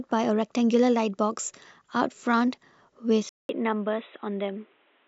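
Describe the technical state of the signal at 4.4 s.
At 4.4 s the input has likely switched to a poorer device, from 3.29 s to the end: after a 200 ms gap, the speech is cut off above 3.9 kHz, slightly quieter, and carries new background noise.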